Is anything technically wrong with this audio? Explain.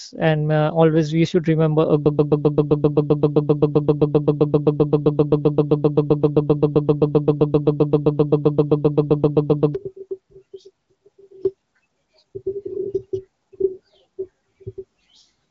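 Yes. From 2.06 to 9.75 s a broken-record loop takes over. A 131 ms fragment repeats exactly, back to back, about 59 times. The likely cause is a stalled player or stream resending its last buffer, so the sound meant for those seconds is lost. Unlike an echo, there is no decay and no new material underneath, only identical copies.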